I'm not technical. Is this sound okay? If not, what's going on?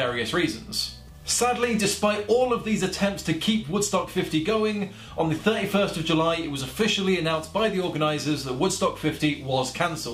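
Yes, this sound is okay, and there's nothing going on with it that needs fixing.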